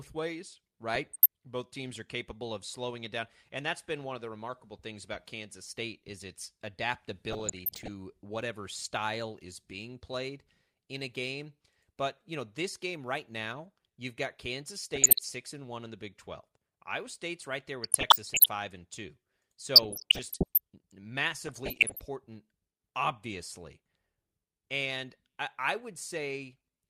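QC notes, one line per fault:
0.94–1.26 s, 7.29–7.91 s (just before "whatever style is being"), 14.93–15.20 s, 17.83–18.46 s (just after "right there"), 19.76–20.58 s, 21.45–21.99 s: DAB burbling. Bit errors under about one percent slip past error correction, so wrong samples put short blips of noise into single sub-bands.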